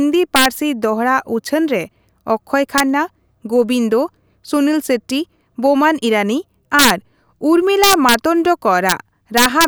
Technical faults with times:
0.36-0.46 integer overflow
2.78-2.80 integer overflow
6.79-6.90 integer overflow
7.84-8.14 integer overflow
8.89-8.92 integer overflow
9.37-9.64 integer overflow

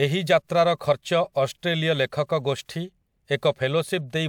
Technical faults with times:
none

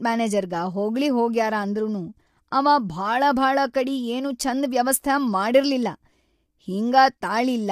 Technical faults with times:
0.00-7.72 low-delay AAC compression

